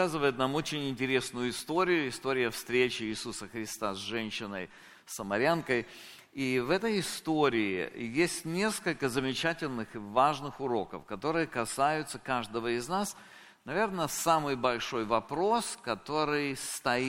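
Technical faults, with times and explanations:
15.64 s, dropped samples: a single sharp click, visible as a thin vertical line through the spectrum. The likely cause is a handful of samples, around four, or roughly a tenth of a millisecond, missing from the stream. The waveform then jumps straight from one value to a later one instead of moving smoothly between them. That instant step carries energy across the whole frequency range, so it reads as a click rather than a gap.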